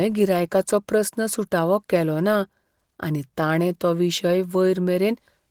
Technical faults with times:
none

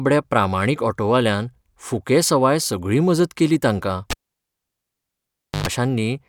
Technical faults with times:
4.10-5.67 cable pulled and plugged in

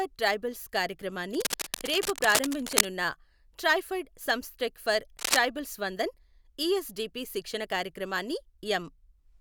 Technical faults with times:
1.34-2.87 cable scratch noise
5.19-5.37 cable scratch noise

